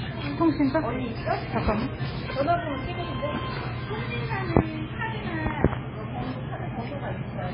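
From start to finish, nothing above 5.2 kHz, with watery, swirling smear that a plain low-pass lacks, likely MP3 compression at a very low bitrate near 16 kbps.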